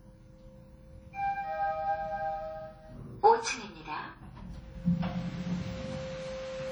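From start to finish the audio has a ringing, washy quality: transients smear over tens of milliseconds, a hiss swells and fades with the signal, and quieter detail drops out in patches. The heavy damage is likely from WMA compression. A transform codec working in long blocks spreads its quantisation noise around each sound and discards weak spectral lines, which fits a low bitrate near 32 kbps, even though content still reaches about 20.1 kHz.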